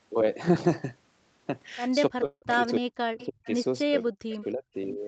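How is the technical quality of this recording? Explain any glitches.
The quality is rough in a few spots. Between about 2 and 5 seconds the speech gets clipped, stalls and picks up faint echoes. The band tops out around 8 kHz, which is just how the call path sounds here.

Speech suppressed in double talk happens from 2.1 to 3.47 s, at 3.84–4.10 s, at 4.26–4.36 s and at 4.54–4.75 s. The speech dips or drops out in chunks, by roughly 40 dB at worst and only about 15 dB in the last one. This is likely the echo canceller ducking everything while the far side was talking too.

A call audio freeze sits inside that first stretch, at 2.25–2.44 s. A jitter buffer that ran dry likely stretched the last sound into a fading smear for 164 ms, including about 60 ms of silence. Speech then resumes where it left off, so nothing is lost but everything after lands 164 ms later.

Echo leak shows up as two short ghost copies of the speech at 3.2–3.26 s and 3.45–3.51 s. 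Each trails the original by 298 ms, about 20 dB and 30 dB down. That's likely the far side's speakerphone sending back what its echo canceller missed.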